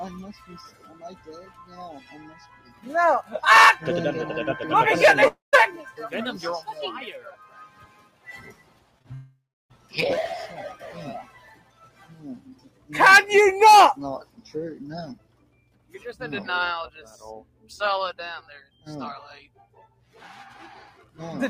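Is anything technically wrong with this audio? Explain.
Yes. Level pumps and tails thin out across the whole clip, and the audio breaks up twice.

Throughout, a noise suppressor applied to music or sounds is audible: the sound swells and sinks by around 15 dB, with sustained parts and decays pulled down while sharp onsets pass. A suppressor tuned for speech treats anything steady or reverberant as background noise and attenuates it, so held material and ambience flutter and lose body.

Sound cut by the noise suppressor occurs at 0.33–3.31 s (about 11 dB down at worst), and at 6.68–9.93 s, 11.23–12.90 s, 14.24–15.97 s, 17.42–17.70 s and 18.64–21.18 s (about 13 dB at worst each). In these stretches the level drops noticeably and decays end early, because the suppressor misread the sound as noise and gated it harder than the rest.

At 5.27–5.55 s and 9.14–9.72 s the sound carries on briefly as a fading buzz, then gives way to near-silence lasting about 160 ms and 310 ms. 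It resumes with roughly 260 ms and 560 ms of material simply gone. This is likely a long network dropout: nothing arrived, the receiver extrapolated the last sound until that ran out, then played silence.

Just before the second gap, short concealed packet loss occurs at 8.99–9.02 s and 9.02–9.06 s, about 20 ms missing each time. These heard as a quick smear or wobble. The decoder bridged each hole by continuing the preceding sound and cross-fading back into the real signal.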